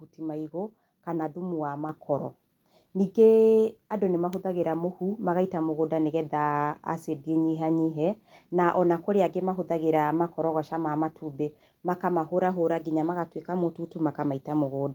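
Speech, with the microphone volume stepped up at 1.89 s, right after "maĩgũ kana thumu wa": voice and background jump about 6 dB together as the software raises input gain.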